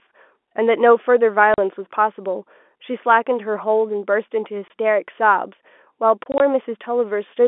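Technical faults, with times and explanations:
1.54 to 1.58 s, packet loss filled with silence: a 40 ms hole of dead silence, consistent with two consecutive 20 ms packets missing; the receiver inserted zeros, so the sound stops abruptly at hard edges.
4.68 to 4.70 s, packet loss filled with silence: a single 20 ms gap, fitting one lost packet, with the same hard cut on each side.
6.24 to 6.40 s, packet loss filled with silence: 60 ms of silence broken into short dropouts over 160 ms, none longer than 20 ms, giving a stuttering, chopped texture inside the narrow telephone band of the G.711 line.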